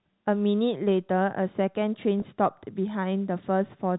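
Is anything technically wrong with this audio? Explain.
Yes, there's one glitch in the speech. From 2.20 to 2.22 s there's packet loss with pitch repetition. About 20 ms of audio went missing, which fits a single dropped packet. The receiver papered over the hole by looping the last pitch period it had. Because the gap is so short, you hear a tiny held, slightly buzzy blip rather than a dropout. The G.711 telephone coding underneath is doing its usual band-limited thing.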